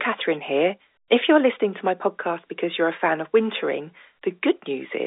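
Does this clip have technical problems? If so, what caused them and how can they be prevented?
No, nothing here needs fixing: it's ordinary speech carried over G.711 telephone coding, so the narrow phone-line band of roughly 300 Hz to 3.7 kHz is simply how that kind of line is meant to sound.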